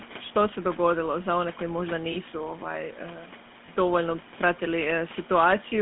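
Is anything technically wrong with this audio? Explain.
Yes. There are two problems: codec damage throughout, and two brief dropouts.

The GSM full-rate codec affects the whole clip. The speech is band-limited to roughly 150 Hz to 3.5 kHz, which fits the 13 kbps full-rate coder. That coder rebuilds the voice from a vocal-tract model driven by a sparse, regularly spaced pulse excitation. The result is a plainly audible buzzy, gravelly roughness.

Lost GSM frames occur at 2.12 to 2.16 s, just after "za one koji možda", and again at 3.66 to 3.69 s. Each gap fits a single missing 20 ms frame. The decoder filled it by repeating the previous frame's parameters, so the sound briefly freezes into a short metallic ring instead of continuing naturally. The room noise sits about 24 dB below the speech.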